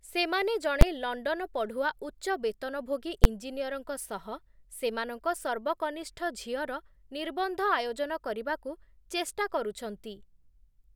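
A calculation in the speech processing chain produced invalid numbers that were pinned at full scale for about 12 ms, which fits a 512-sample block. Each event is heard as a single loud bang, at 0.81 s and 3.24 s.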